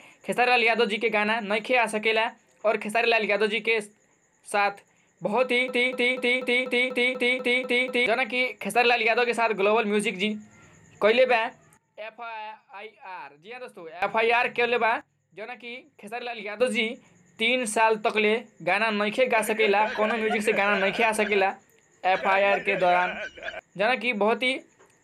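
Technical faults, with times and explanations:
5.68–8.06 s, broken-record loop: the stream likely stalled, resending its last fragment, so a 244 ms piece repeats ten times, replacing the audio.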